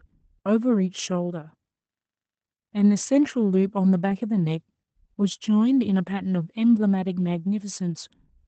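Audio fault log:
4.09–4.11 s, lost packet rebuilt from error correction: brief rougher, noisier patch with no gap; the decoder played a low-bitrate copy, consistent with one lost 20 ms packet.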